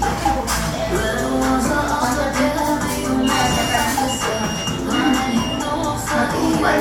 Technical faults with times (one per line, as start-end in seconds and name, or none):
none